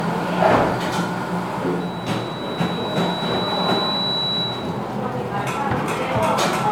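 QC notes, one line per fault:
Throughout: generation loss. The sound is swirly, smeared and hollow, with blurred attacks and nothing above 19.9 kHz. This likely comes from about seven MP3 passes, which fits a 128 kbit/s chain. Each pass requantised on a shifted frame grid, stacking noise and spectral holes.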